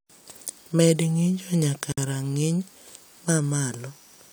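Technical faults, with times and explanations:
1.92 to 1.98 s, gap at a join of encoded pieces: a 54 ms hole with smeared edges, where untrimmed encoder padding was left between separately encoded chunks.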